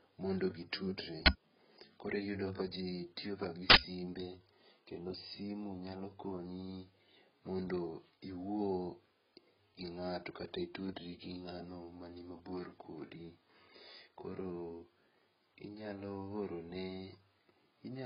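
Across the whole clip, the speech was likely passed through more than one lossy codec, a very low-rate AAC encode followed by an HE-AAC re-encode. The second stage wasted bits on the first stage's smearing and added its own, so both kinds of artefact sit together and nothing survives above 5.4 kHz.

From 1.26 to 1.28 s, and again from 3.7 to 3.78 s, an uninitialised buffer was played before any audio had been written into it, so stale memory came out as samples. The first event is a sudden, loud crack lasting 20 ms, and the second a loud burst of harsh digital noise lasting 80 ms.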